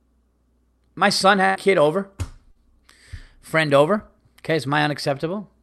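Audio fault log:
1.45 to 1.57 s, burst of packet loss: about 100 ms of consecutive audio failed to arrive in time for playback. The receiver bridged roughly 98 ms of it by extending the last decoded sound and attenuating it as the gap lengthened, which produces a held, fading tone or hiss instead of new speech. Playback then resumes further along the signal, so the 100 ms in between is simply absent, heard as a smeared stall followed by a skip.
2.51 to 2.57 s, short concealed packet loss: a much shorter hole of about 40 ms went missing before decoding, and around 38 ms of it was synthesised by continuing the preceding sound, pitch-based if voiced and shaped noise if not, before crossfading back into the received audio. The result is a brief wobble or smear in the speech, against the codec's upper band limit near 12 kHz, which fits an Opus call path around 48 kbps.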